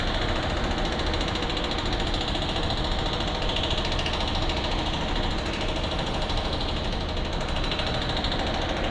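Everyday sound recording, no technical faults heard.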